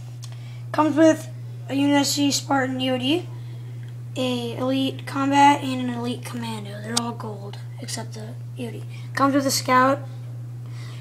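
Nothing in this clip stands out as a technical fault; it runs along steadily with nothing breaking in or dropping away.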